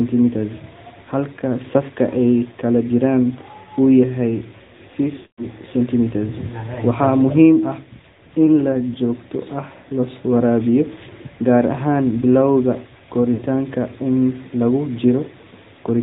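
Speech heard through the AMR narrowband mobile codec: nothing above 4 kHz survives, and a buzzy, synthetic texture points to about a 10.2 kbps mode, not mere band-limiting. Lost AMR speech frames occur at 5.16–5.46 s (220 ms, consistent with about eleven 20 ms frames) and at 13.34–13.43 s (60 ms). The decoder stretches the last sound and fades it out instead of cutting abruptly to silence.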